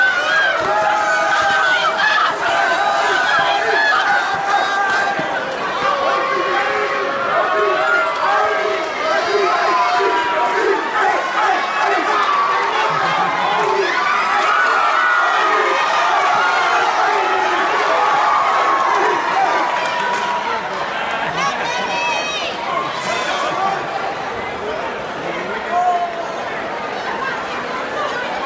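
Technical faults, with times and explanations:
No technical faults are audible anywhere in this recording.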